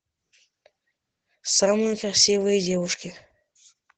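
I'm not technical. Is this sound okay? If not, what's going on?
No. The speech carries Opus voice compression from start to finish. This squeezes the sound into a very small amount of data. To do that, it drops the highest sounds, above about 8 kHz, so the voice loses its crisp edge. It also rebuilds the voice from a rough model rather than copying it exactly. The damage is plainly audible. The speech sounds muffled and a little hoarse, with a slightly robotic quality throughout.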